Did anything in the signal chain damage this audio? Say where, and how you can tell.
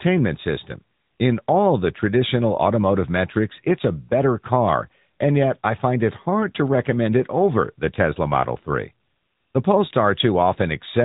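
Yes, at the codec stage, and it runs the whole way through the speech. This is the AMR narrowband mobile codec: nothing gets past about 3.8 kHz, so the top end is gone and sibilants go dull. The voice has that plainly audible buzzy, synthetic edge from rebuilding sound as a vocal-tract model fed by a few pulses per 5 ms subframe. The amount of damage fits a mid-rate mode around 10 kbps.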